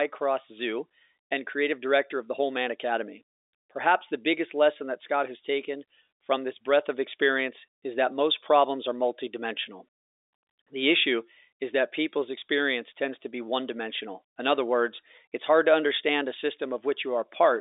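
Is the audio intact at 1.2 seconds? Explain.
Yes, the audio is intact at 1.2 seconds; nothing breaks or disturbs the sound there beyond the narrow telephone band that G.711 telephone coding gives the whole clip.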